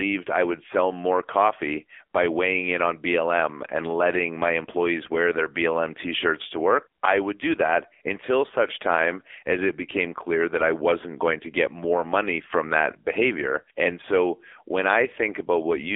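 AMR narrowband mobile codec damage runs through the whole speech clip: the band is squeezed to about 300 Hz to 3.5 kHz with nothing above 3.6 kHz, and heavy buzzy, synthetic coloration from the pulse-driven vocal-tract model fits a low rate near 6.7 kbps.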